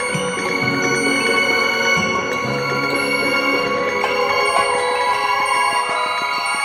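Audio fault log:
3.80–6.56 s: train of clicks, about 6.2 clicks per second at a regular spacing, roughly twenty in all, each peaking near the music's own level. Likely interference or a faulty connection or power supply. On the waveform, evenly spaced spikes; on a spectrogram, thin vertical broadband lines.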